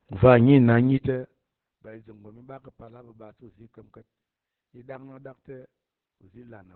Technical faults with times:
0.00-6.75 Opus voice compression

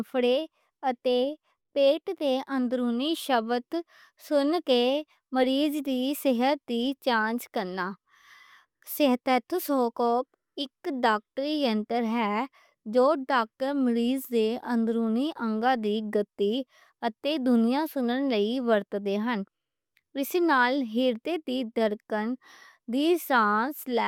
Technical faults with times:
none

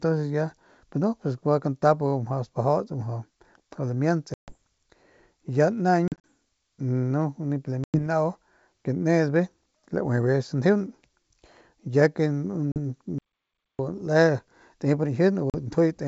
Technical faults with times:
4.34-4.55 packet loss on an ADPCM call
6.08-6.18 packet loss on an ADPCM call
7.84-7.99 packet loss on an ADPCM call
12.72-12.78 packet loss on an ADPCM call
13.18-13.79 audio dropout to silence
15.50-15.55 packet loss on an ADPCM call

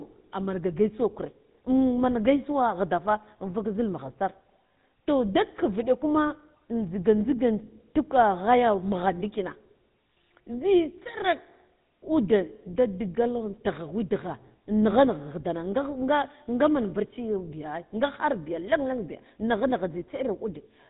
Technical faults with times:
0.00-20.89 GSM full-rate codec

